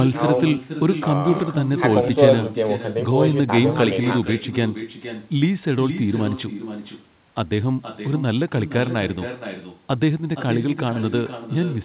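Echo with no canceller runs through the whole of this speech clip: every phrase returns about half a second later, roughly 10 dB quieter and thinner, because the far end's loudspeaker feeds its microphone and nothing removes that copy before sending it back. The sound also stops at 4 kHz, which fits a narrowband telephone codec.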